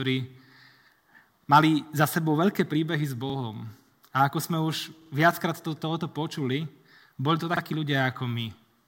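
Repeated buffer faults occur at 1.44 s, 3.30 s, 5.02 s and 7.57 s. Each time, fresh audio failed to reach the output in time, so the device replayed the chunk it had just played, about 46 ms long, which fits a 2048-sample buffer. Most events repeat the chunk once, but the one at 5.02 s repeats it twice, running to 5.11 s. Each is heard as a brief stutter with hard joins, and no sound seems to be skipped afterwards.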